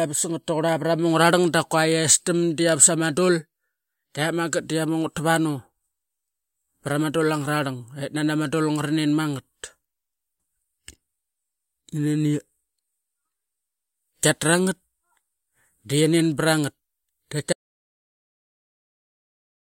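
At 17.53 s the speech is cut off mid-flow and the audio drops out to silence for the remaining 2.07 s, with no room tone at all. This is an audio dropout to silence, most likely from the input being lost, through a disconnected device or a stray mute, while recording carried on writing zeros. On the waveform the trace collapses to a flat line. On a spectrogram every frequency goes fully dark at once, with no noise floor.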